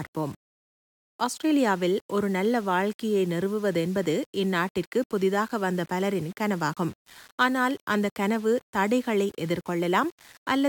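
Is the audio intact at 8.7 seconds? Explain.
Yes, the speech at 8.7 seconds plays through intact, with no dropout, click or other break at that point.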